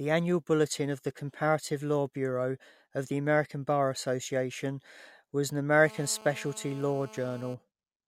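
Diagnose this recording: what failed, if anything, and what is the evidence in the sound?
A GSM phone buzz enters the speech from 5.85 s to 7.54 s, right after "was an". It is a hard, raspy buzz at 217 Hz with a dense stack of harmonics, steady throughout, about 21 dB below the speech. The fault sits in the analogue wiring: a 2G handset in a call nearby transmits in 217 Hz bursts, and the audio circuitry rectifies those radio pulses into an audible tone unrelated to the signal.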